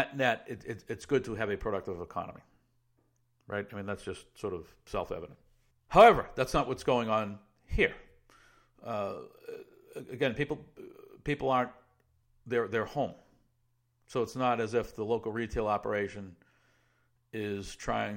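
Two devices in the chain appear to run on separate, unsynchronised clocks drifting apart by around 300 parts per million, so a single sample is likely dropped or repeated each time the mismatch adds up to a whole sample. In this speech clip that produces clock slip clicks from 0.11 s to 18.11 s, around ten faint ticks a second and a couple of hundred in all, most noticeable on louder stretches and disappearing in the gaps.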